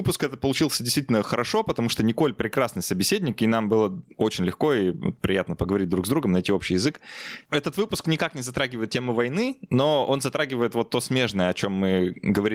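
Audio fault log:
Throughout: gain pumping. Gain ducks under each loud sound, swinging around 20 dB, likely from excessive input gain driving a fast limiter.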